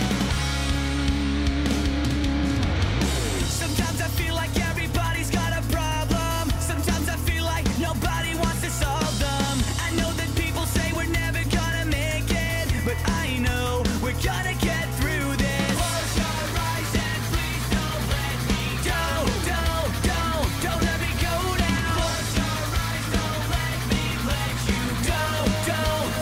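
No audible technical faults.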